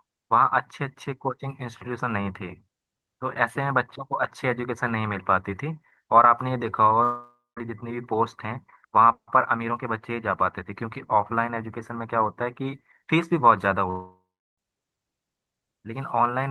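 At 7.03 s the speech breaks off for about 0.55 s. The last sound is stretched into a fading buzz or hiss, and the final 0.18 s is near-silent. Speech resumes at 7.58 s with a piece missing. At 13.90 s the same thing happens for about 0.69 s, ending in 0.36 s of silence before speech returns at 14.59 s. These gaps are likely a long network dropout. The receiver concealed the missing audio and then gave up. The audio passed through the Opus call path, with content cut off above 12 kHz.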